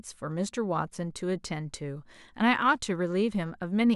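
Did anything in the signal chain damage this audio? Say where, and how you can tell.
Yes: three sharp single clicks in this speech at 0.31, 1.24 and 2.62 s, likely dropped samples in the driver or buffer, where a handful skipped makes the waveform jump.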